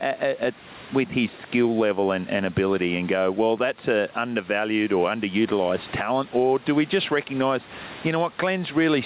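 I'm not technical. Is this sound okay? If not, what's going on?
No. There's gain pumping all through this speech. The faint room noise in the background is normal. Likely the mic gain is set far too high, so an automatic limiter keeps yanking the level down, squashing everything.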